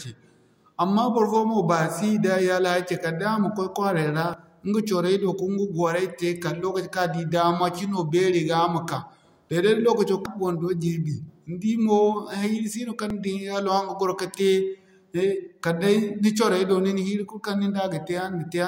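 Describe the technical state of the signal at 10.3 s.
At 10.26 s there is a burst of damaged data in the compressed stream, only a few milliseconds long. Corrupted bytes in the encoded speech make the decoder misread the affected frame and lose sync until it finds the next valid frame header, which produces a brief chirp or blip. On a waveform it shows as an abrupt discontinuity; on a spectrogram, as a thin vertical broadband streak.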